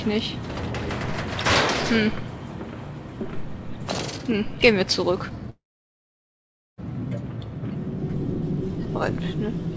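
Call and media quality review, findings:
Call audio freeze, 5.50–6.80 s: brief fading buzz, then about 1.2 s near-silence, audio resumes where it stopped. Likely jitter buffer underrun from held-up packets. Receiver extended last sound, then muted. No content lost; playback delay grows about 1.3 s. Spectrogram: short smeared tail, blank gap, energy capped at 8 kHz throughout, which fits a G.722 wideband call path. Waveform: decaying stub, then flat line.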